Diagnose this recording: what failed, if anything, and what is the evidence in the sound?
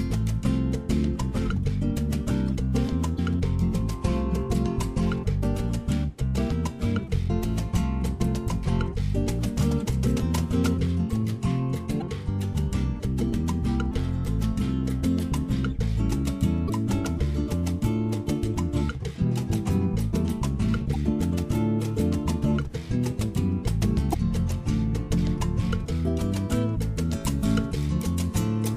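The codec stage has damaged data in the compressed stream. There are short blips, around 40 ms or less, at 3.15, 11.98, 16.66, 20.93 and 24.10 s. Each time the decoder hits bad bytes, misreads the frame, loses sync and hunts for the next frame header before recovering.

Playback has pre-emphasis left on from 27.12 s to the end. The top end jumps up, about 8 dB hotter at 10 kHz than at 1 kHz, so it turns thin, bright and sibilant. The shape matches the CD 50/15 µs curve, with the matching de-emphasis cut never applied.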